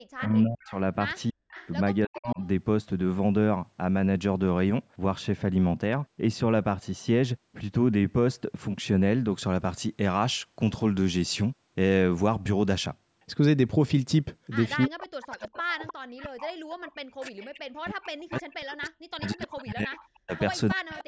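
From 0.0 to 9.3 s the speech is dull and muffled: de-emphasis was applied wrongly, a treble cut applied where no pre-emphasis existed, so the response falls smoothly to about 14 dB down at 10 kHz relative to 1 kHz, on top of the call path's normal band limit at 8 kHz.

Between 0.18 and 2.47 s an echo leak appears: a delayed copy 307 ms behind, about 20 dB under the speech, likely from a loudspeaker-side echo canceller passing residual pickup back. Over 0.24 to 2.41 s the speech is suppressed in double talk: it dips and breaks up, falling by as much as roughly 40 dB for about a second in total. This is likely the canceller turning down both talkers while they overlapped.

The echo leak returns from 14.83 to 17.46 s at about 15 dB below the speech and again from 18.4 to 21.03 s at about 20 dB below, both with the same 307 ms delay and likely with the same cause. Speech suppressed in double talk also runs from 14.86 s to the end, with drops approaching 40 dB over roughly five seconds in total, likely from the canceller again attenuating overlapping talk.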